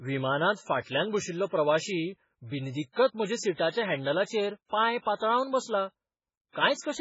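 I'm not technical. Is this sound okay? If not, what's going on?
No. Throughout, the speech sounds watery and dull, with nothing above about 7.6 kHz, likely from heavy MP3 compression; unlike simple muffling, the fuzz swirls. At 5.15 to 5.21 s, right after "हँडलांचेर पाय", a hiss of about 54 ms comes before a sharp sound. That is pre-echo: the noise arrives before the attack, not after it like an echo.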